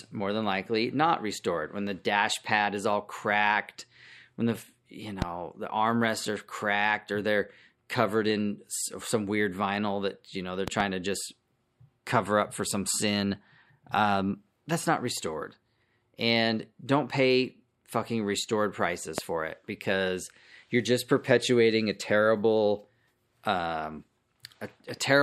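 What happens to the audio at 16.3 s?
Nothing goes wrong at 16.3 s; the speech runs on intact there, with no dropout, click, distortion or other fault.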